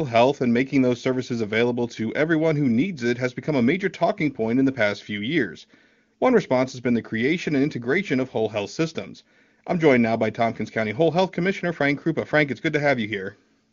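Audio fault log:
Nothing stood out on listening to this speech, which carries the band-limited character of AMR wideband (HD Voice) coding at a high rate.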